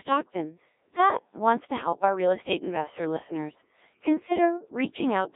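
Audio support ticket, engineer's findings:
Robotic, buzzy speech throughout, waveform detail gone, heavy codec damage. Band-limited roughly 200 Hz to 3.7 kHz, nothing above 3.8 kHz. Probable component: Codec 2 vocoder in the radio path. Decoder rebuilds speech from sine waves using only pitch, voicing, energy and spectral envelope, with damage consistent with a very low rate around 1.3 kbit/s.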